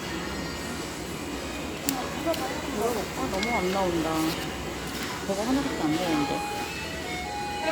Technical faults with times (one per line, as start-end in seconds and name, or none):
none